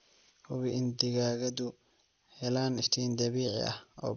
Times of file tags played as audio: none

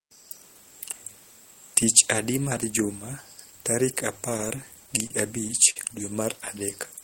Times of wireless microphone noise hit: none

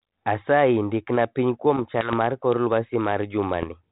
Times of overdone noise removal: none

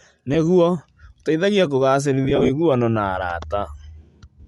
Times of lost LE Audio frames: 0.34, 2.25-2.50

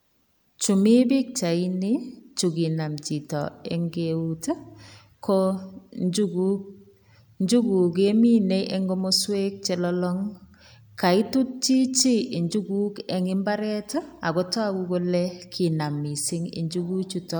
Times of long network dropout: none

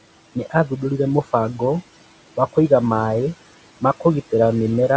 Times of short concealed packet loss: none

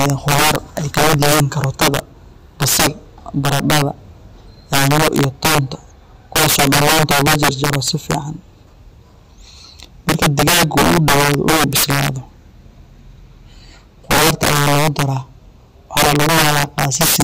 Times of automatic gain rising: none

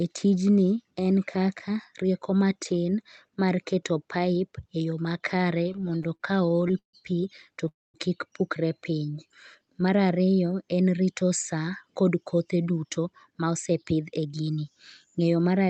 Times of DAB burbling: none

